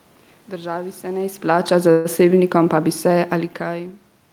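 At 1.35 s, just after "se ne", automatic gain falling begins. The gain control judged the input too loud, or its background noise too strong, and pulled its level down gradually, by about 5 dB, until 3.90 s. The sound and the room noise behind it sink together.

From 1.91 to 2.07 s there is a call audio freeze. The last sound is stretched into a fading buzz or hiss for 135 ms, with no silence. Likely, packets were delayed and the jitter buffer ran dry. Playback then resumes where it stopped, so nothing is lost.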